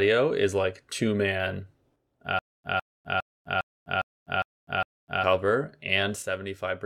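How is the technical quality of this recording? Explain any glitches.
The recording has two kinds of glitch.

One channel drops out twice. The first time is from 1.96 to 2.20 s, right after "is like two man". The second runs from 6.22 s to the end. Each time, the level falls abruptly by about 6 dB. The likely cause is the loss of one stereo channel before the mono mix. Only half the shared signal survives.

A stutter with silent gaps runs from 2.39 to 5.24 s. A 154 ms fragment plays seven times. Each repeat is followed by 252 ms of dead silence, giving a steady cycle every 406 ms. The likely cause is a stalled stream replaying its last fragment. The real audio in that stretch is lost.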